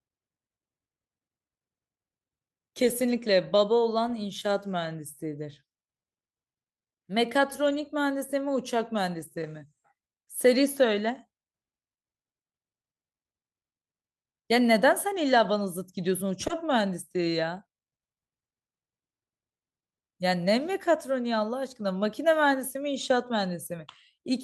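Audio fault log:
16.47–16.51 s, short concealed packet loss: 20 ms of speech never arrived and was rebuilt from the preceding sound, heard as a brief smear before blending back.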